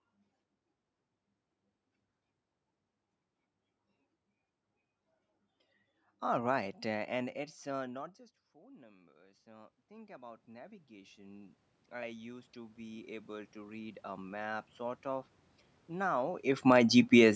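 Automatic gain rising from 7.71 to 15.16 s, just after "right uh and it's": the talker moves away around 7.5 s and the input drops by about 24 dB. The gain control slowly raises its gain by about 23 dB, so the voice and room noise swell together over several seconds.

Automatic gain falling from 16.55 to 17.31 s: the talker comes back closer around 16 s, so the boosted signal arrives too loud. The control then pulls its gain down by about 4 dB, and the voice and background sink together within the final second.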